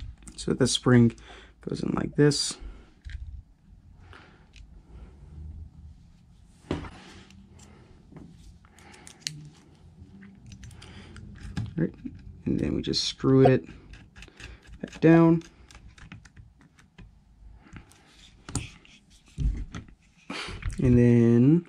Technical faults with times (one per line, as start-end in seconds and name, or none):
2.13-2.15 corrupt frame decoded
6.84-6.97 corrupt frame decoded
13.45-13.48 corrupt frame decoded